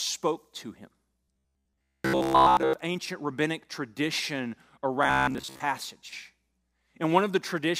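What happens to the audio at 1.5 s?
At 1.5 s the speech has robotic sound from repeated short buffers, from 1.24 to 2.73 s, between "to him" and "ancient rabbinic tradition". The likely cause is late audio being covered by looping a roughly 15 ms chunk, which imposes a rigid 66.8 Hz metallic buzz over most of the span. The waveform shows identical repeating cycles, and the spectrogram shows evenly spaced harmonic stripes at multiples of 66.8 Hz.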